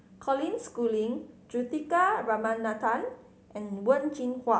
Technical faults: none

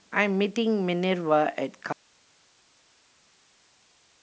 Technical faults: audio dropout to a faint residue

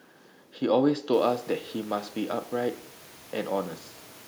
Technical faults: none

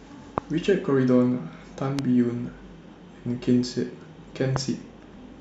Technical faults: loud pop

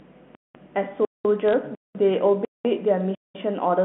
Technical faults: mains hum; gap between chunks; bit errors on a digital phone line

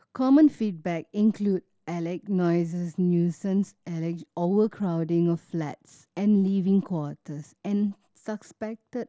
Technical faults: none

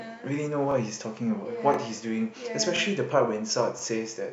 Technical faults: overlapping chunks

